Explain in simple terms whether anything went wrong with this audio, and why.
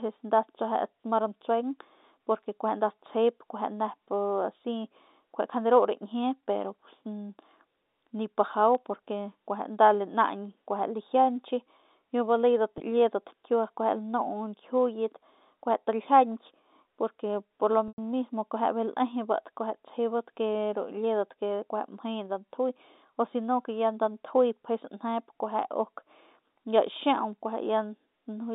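Two separate problems can be heard in this telephone-quality speech recording.

The first is two single sharp clicks, at 8.75 s and again at 27.33 s. These are most likely dropped samples: a sliver of the recording, a tiny fraction of a millisecond, went missing, so the sound jumps abruptly from one point to a later one. Nothing audible is lost. You hear only the jolt, as an instant tick with no stretching or buzzing around it.

The second is packet loss with pitch repetition. Chunks of the call failed to arrive, and the receiving end filled each gap by replaying the last tiny cycle of the voice. At 12.78 s the gap is only 20 ms, so the voice seems briefly held with a buzz. At 17.88 s a 100 ms gap, about five lost packets, is too long to patch: the repeated sound fades into silence, and the speech then blends back in. Unlike the clicks, these events draw the sound out rather than snapping it.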